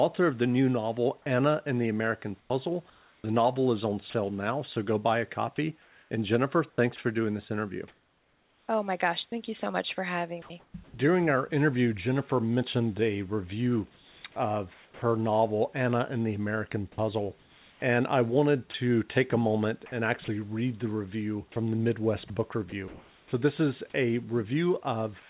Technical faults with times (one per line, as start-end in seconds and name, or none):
2.40-6.98 sound chopped by the voice detector
9.60-10.94 sound chopped by the voice detector
13.94-15.02 comfort noise in place of the background
14.74-15.02 sound dropped by the voice detector
16.92-25.29 sound chopped by the voice detector